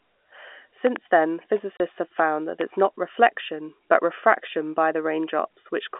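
A speech recording carried over a G.711 telephone line, band-limited to about 250 Hz to 3.5 kHz, with two kinds of fault. A sudden voltage step, most likely from a plug, switch or static discharge, entered the signal path and produced a loud pop twice: a double pop from 0.87 to 0.98 s, peaking around ten decibels above the speech, and a single pop at 2.61 to 2.63 s, louder still. The speech carries on underneath both. Separately, packet loss filled with silence removed audio from 1.77 to 1.80 s, leaving a hard-edged 30 ms hole, which fits a single lost 30 ms packet.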